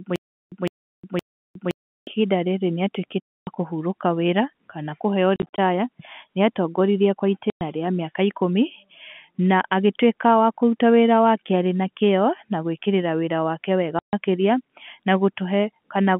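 From the first instant to 2.07 s there is a stutter with silent gaps. The player was likely stalling and, on each retry, replaying its last fragment before running dry. The effect is already under way when the audio begins: a 158 ms burst of speech recurs three times at a steady 517 ms period, separated by about 360 ms of dead digital silence. The speech that belonged in those gaps is gone.

Later, packet loss filled with silence opens hard-edged holes. At 3.25 s about 270 ms vanishes. From 5.36 to 5.58 s, 120 ms is lost in scattered pieces across 220 ms, the longest run being 40 ms. At 7.5 s 110 ms drops out, and at 13.99 s 140 ms. Every gap is a multiple of 10 ms, which fits 10 ms packets. The receiver simply inserted silence where the packets should have been. Beneath all this, the narrow 150 Hz to 3.4 kHz telephone band of the G.711 line can be heard.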